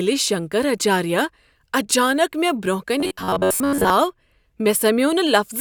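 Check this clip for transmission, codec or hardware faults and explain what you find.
One fault is audible. Robotic sound from repeated short buffers, 3.00 to 3.90 s: likely audio arriving too seldom, so roughly 11 ms segments repeat most of the time, forcing a rigid, metallic 93.8 Hz buzz onto the speech.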